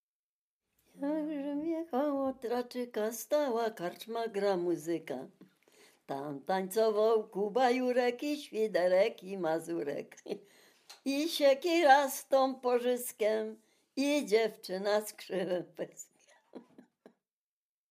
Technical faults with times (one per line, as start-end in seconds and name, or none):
none